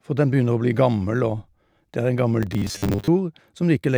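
From 2.43 to 3.08 s, robotic sound from repeated short buffers: a fixed 100 Hz metallic buzz, likely a looped 10 ms block replacing about half the speech, rather than silent gaps.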